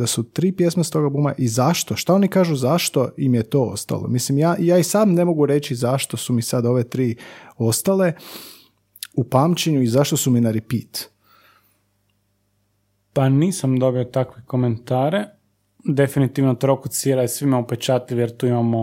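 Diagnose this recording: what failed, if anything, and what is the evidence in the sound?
Nothing stood out on listening to this speech recording.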